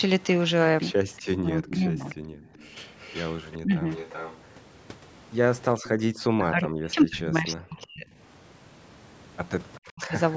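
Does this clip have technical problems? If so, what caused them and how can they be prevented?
Yes. A delayed second copy of the speech trails the talker from 1.16 to 5.89 s, about 15 dB below it, with a much fainter scrap at 9.75 to 9.80 s. The 385 ms lag points to an echo leak, likely from a loudspeaker whose echo canceller let through part of what its microphone picked up. A headset, or a lower speaker volume, prevents it.

The talker's level sinks or breaks up at 1.26 to 2.06 s, 3.63 to 3.87 s, 6.37 to 8.06 s and 9.84 to 10.16 s. The dips are around 20 dB in the first two and up to roughly 40 dB later. This is likely speech suppressed in double talk: with both sides talking, the canceller mistook this voice for echo and turned it down. Speaking in turns, or using a canceller with better double-talk handling, prevents it.

The room sound drops out briefly at 2.33 to 2.53 s, by about 17 dB, and at 5.83 to 6.09 s, by about 40 dB. 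This is background gated by the echo canceller, which pulled the microphone down hard while the loudspeaker played. Reducing echo at the source lets the canceller act more gently.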